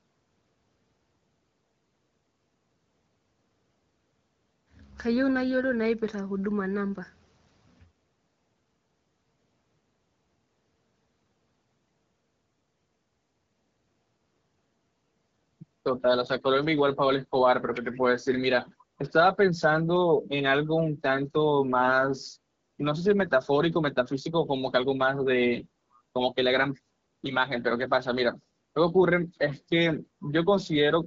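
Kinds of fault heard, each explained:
Echo leak: at 17.92 to 18.01 s and 24.05 to 24.09 s, short scraps of the speech return about 493 ms late, very faint at roughly 30 to 35 dB down. The likely cause is a far-end loudspeaker whose echo canceller let residual pickup back into the call.
AMR bit errors: at 25.60 to 25.65 s the speech briefly turns hoarse and gargly but keeps its pitch and level. This fits a few AMR-WB frames at 12.65 kbit/s arriving with some weakly protected bits flipped, which misplaces excitation pulses and skews finer parameters.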